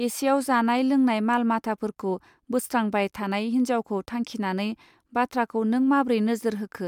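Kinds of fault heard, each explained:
Nothing stood out on listening to the speech recording.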